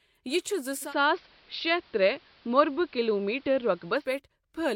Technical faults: digital radio blending to analogue

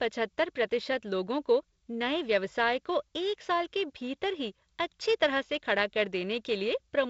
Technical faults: none

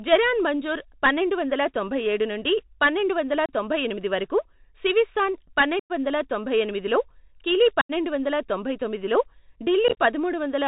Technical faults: Bluetooth CVSD headset codec; unconcealed Bluetooth headset packet loss

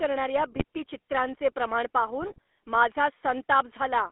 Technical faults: GSM full-rate codec; GSM bit errors

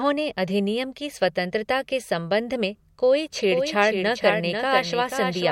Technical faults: doubled audio track

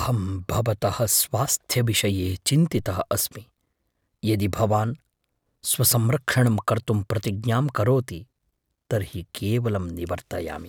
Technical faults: DC step

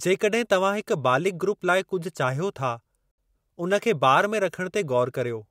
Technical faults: Bluetooth stall

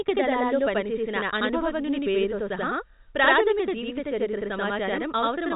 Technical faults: channel delay (doubling)

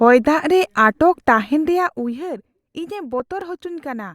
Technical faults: overlap between stream segments; block of digital silence

